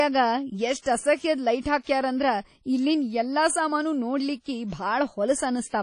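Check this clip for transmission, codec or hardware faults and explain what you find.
One codec fault runs through the whole clip. WMA compression, throughout: likely a low-bitrate transform encoder, near 32 kbps, smearing quantisation noise and dropping weak components. The speech rings and sounds washy, with nothing above 10.1 kHz.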